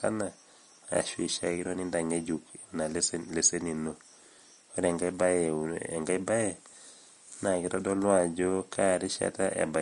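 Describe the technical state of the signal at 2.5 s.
At 2.5 s, as across the whole clip, the speech is hissy and grainy with nothing above 10.6 kHz, likely Vorbis compression coarsely quantising the treble, which suggests a low bitrate near 39 kbps.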